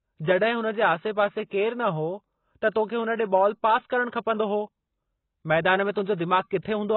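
Throughout the speech, nothing is heard above 4.2 kHz, and the remaining band is heavily smeared and warbly. The likely cause is AAC compression, with damage that fits a bitrate near 16 kbps. Unlike a plain low-pass filter, the codec adds fizzy, swirling texture on sibilants.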